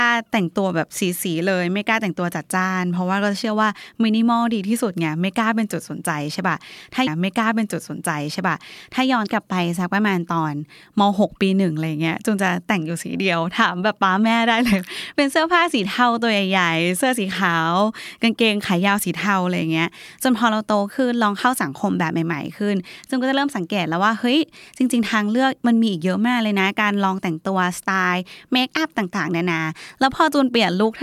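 A stream segment repeated at 7.06 to 9.06 s: the player queued the same chunk of the speech twice, so about 2.0 s of audio plays again. A small blip marks the jump back, and the listener hears that passage immediately repeated before the clip continues.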